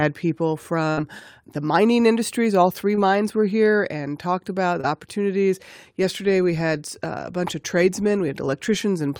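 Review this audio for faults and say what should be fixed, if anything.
At 0.91 to 0.99 s, just before "the mining industries", the speech briefly turns into a held, fading continuation of the previous sound, then jumps ahead. This is a burst of packet loss. About 60 ms of audio never arrived in time, and the receiver covered the gap with roughly 57 ms of extrapolated, decaying sound. When real audio resumed, the missing stretch was simply gone. A larger jitter buffer or forward error correction on the link would help prevent it.

Two shorter glitches occur at 2.95 to 2.99 s, just before "were here and talked", and at 4.81 to 4.85 s, right after "here and talked about". Each sounds like a quick smear or wobble rather than a clean break. These are short concealed packet losses. Each time about 20 ms went missing, and the decoder bridged it with roughly 19 ms and 22 ms of synthesised continuation before blending back into the real signal. 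Adding redundancy or packet-loss resilience to the codec stream, and fixing network jitter, would help prevent it.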